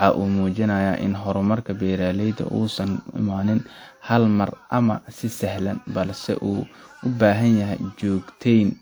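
Generation loss throughout: the speech sounds swirly, smeared and hollow with blurred attacks, likely from several repeated lossy encodes, which fits a 128 kbit/s WMA chain.

Clock slip clicks from 0.15 to 8.77 s: faint regular ticks, about fourteen a second, likely single-sample slips between two unsynchronised clocks drifting roughly 300 ppm apart.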